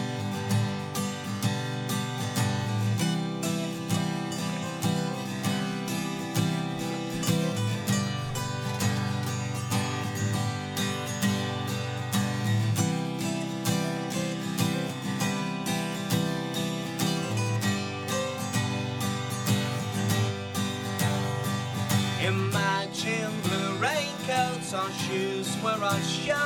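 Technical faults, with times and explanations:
There are no technical faults to report in this audio. Nothing in it calls for a time or an explanation.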